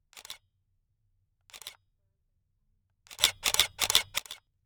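An everyday-sound recording with a sudden gain jump: at 3.20 s the level leaps up by about 20 dB in a single step and holds there until 4.18 s, when it drops back just as abruptly. The background rises and falls along with the foreground sound, so the change is in the overall signal gain rather than the source itself. The likely cause is a digital gain setting or bit shift applied instantly, with no ramp.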